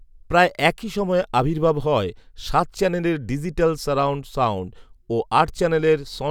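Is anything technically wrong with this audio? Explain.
No, nothing technically wrong turns up anywhere in this speech recording.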